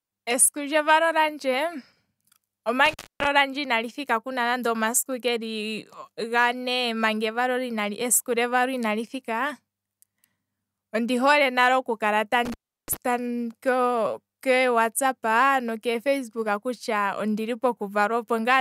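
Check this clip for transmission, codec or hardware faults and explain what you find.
An intermittent contact fault breaks up this speech twice: from 2.85 to 3.27 s, with about 262 ms fully open, and from 12.45 to 12.97 s, just after "hole nale oku kala", open for about 343 ms. A loose plug or cable momentarily loses its connection, so the sound cuts out with crackle at each edge and faint hiss during the gap. That scratchy make-and-break separates it from a clean digital dropout, which falls to silence with no crackle.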